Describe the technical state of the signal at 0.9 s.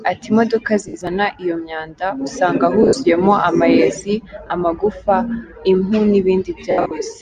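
At 0.9 s the speech is hit by lost LE Audio frames, from 0.88 to 0.94 s, about 60 ms, which fits six 10 ms LC3 frames. The decoder fills the gap by repeating the last good spectrum with randomised phase signs and then starts fading it, so the sound turns into a brief noisy smear just before "iyo myanda usanga". On a spectrogram, harmonic striations blur into a flat, grainy band. The waveform loses its periodic shape and its envelope dips.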